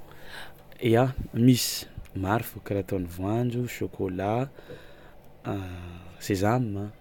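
A speech recording with one technical glitch: a single sharp click at 3.42 s, which sounds like dropped samples. Likely a handful of samples went missing from the stream, well under a tenth of a millisecond, so the waveform jumps straight from one value to a later one. That gap is far too short to lose any actual sound. You just get that one tick, which would show as a thin vertical line across the spectrum.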